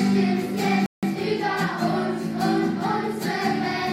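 At 0.86 s the sound cuts out abruptly and stays silent until 1.03 s, a gap of about 168 ms, then resumes. This playback stall is likely the player running short of data or having its thread blocked. On a waveform it shows as a flat line; on a spectrogram, a blank vertical band.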